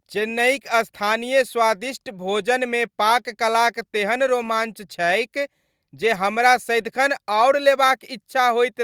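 Nothing jumps out here at all: the speech runs along without any glitch, dropout or distortion catching the ear anywhere.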